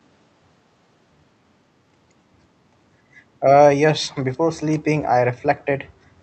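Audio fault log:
2.93–3.15 s, background gated by the echo canceller: the room sound dips about 6 dB for roughly a fifth of a second while the canceller clamps the mic, then recovers.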